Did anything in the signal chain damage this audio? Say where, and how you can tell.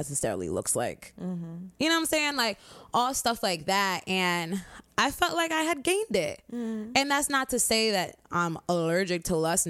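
No, nothing in the signal chain stood out as damaging this speech on listening.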